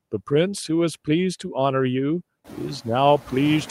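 Noise suppressor artifacts run through the whole clip. The suppressor judges, frame by frame, which frequency bands hold steady noise, and pulls those bands down by about 19 dB. The background therefore drops away in the gaps between words and comes back underneath them as the speech opens the bands again. The room noise itself climbs by about 19 dB around two and a half seconds in, then sits about 18 dB below the speech, making this pumping easier to hear.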